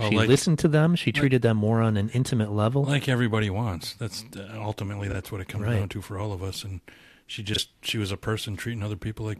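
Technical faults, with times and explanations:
5.09–5.15 s and 7.53–7.59 s: frames out of order. Two adjacent 23.2 ms blocks play swapped, which fits single exchanged frames. Each spot gives a brief garbled flutter, and no time is lost.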